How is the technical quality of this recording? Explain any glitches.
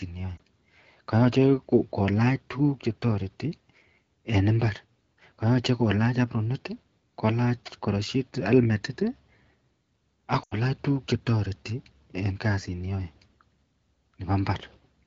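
The recording has two short dropouts where the sound briefly falters. Both are lost AMR speech frames. The wideband coding itself is clear, as expected near 12.65 kbit/s.

At 0.37–0.41 s there is a quick dip or warble, which fits one missing 20 ms frame. At 10.43–10.58 s, just before "tuguk chetareti en kasit", the sound drops to near silence within two frames, a gap of about 80 ms, which fits four lost frames in a row. The frames failed their error check, so the decoder repeated the last good pitch and vocal tract settings at falling gain. The speech then returns weak or rough for a moment.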